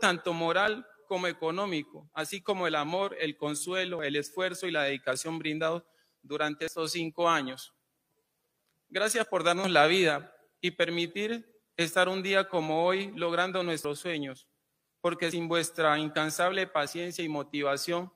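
Six times the recording side likely failed to collect its samples before the hardware overwrote them, a dropped buffer (overrun), so short stretches of audio vanish and the surrounding material is spliced straight together. Each is heard as an abrupt jump forward, with no gap of silence: at 3.99 s and 6.68 s roughly 40 ms goes missing, at 9.64 s and 16.88 s around 20 ms, and at 13.85 s and 15.32 s about 70 ms, the longest skips.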